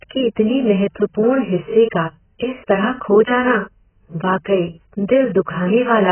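From start to end, the speech is dull and smeared. Nothing sounds above 3.1 kHz. Sibilants turn fizzy and sustained sounds warble. This is likely AAC compression, heavily damaged at a very low bitrate. The codec cuts the top band and leaves spectral holes.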